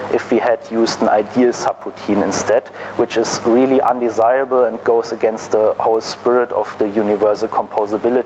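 Gain pumping runs through the whole clip. The level drops under each loud sound, a swing of about 15 dB. Loud and soft parts sit close together, and the sound feels squashed. The likely cause is gain set far too high, with a fast limiter clamping it back down.

From about 1.8 s to 8.0 s, clock drift buffer slips appear. About four short clicks land every 2.07 s while there is signal. Two devices likely run on separate clocks that disagree by roughly 70 parts per million. The buffer between them gradually fills or drains. Then a tiny block, around seven samples, is dropped or repeated. Each of these jumps makes a click.

The call path's cut-off means nothing is heard above 8 kHz.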